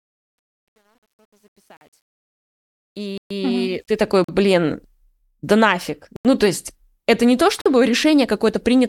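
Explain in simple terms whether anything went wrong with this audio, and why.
Two things went wrong. The fade-in keeps too few bits and adds no smoothing noise, which sounds like a coarse stage of roughly 10 bits. This truncation distortion makes the opening grainy from 0 to 2.7 s, easing by 4.05 s, where the fade-in ends.

The program also probably failed to fill its output buffer in time, so blocks of digital silence cut in. These come at 1.77 s (43 ms), 3.18 s (128 ms), 4.24 s (43 ms), 6.16 s (85 ms, after "да нафиг" and before "то есть это не") and 7.61 s (43 ms, after "есть это не то"). The 43 ms gaps fit a 2048-sample buffer.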